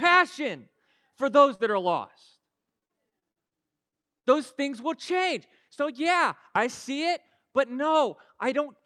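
Between "for those" and "are lost", at 1.55 to 1.61 s, about 40 ms of audio arrived too late for the decoder. This is a short concealed packet loss: the receiver extended the preceding speech to cover the hole and then blended back, leaving a brief smear across the join. The last 20 ms of that stretch, 1.59 to 1.61 s, is a lost packet rebuilt from error correction. The decoder played the low-bitrate backup copy carried in the following packet, so that sliver sounds rougher and grainier than the speech around it.

Just after "are lost", from 2.79 to 3.53 s, there is repeated packet loss with a robotic sound. Six separate gaps, the longest 40 ms, were each patched by continuing the last sound, and together they cover about a quarter of the span. The speech comes through choppy, with pieces missing.

Two more short concealed packet losses follow. At 3.89 to 3.94 s, 40 ms went missing and was papered over with a short smear. 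At 4.02 to 4.05 s, a 20 ms hole gives a quick wobble.

At 4.19 to 4.26 s there is a burst of packet loss. About 40 ms of consecutive audio never arrived in time, so the receiver stretched the last sound while fading it down. It is heard as a brief held tail, and the speech resumes with that piece missing.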